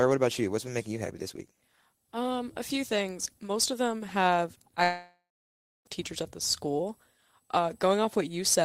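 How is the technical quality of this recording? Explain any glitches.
One clear glitch in this speech recording. From 4.83 to 5.87 s, the sound smears into a fading buzz, then drops to near silence for about 0.65 s. When speech resumes, about a second is missing. This is likely a long network dropout: audio stopped arriving, and the receiver extended the last sound until it gave up.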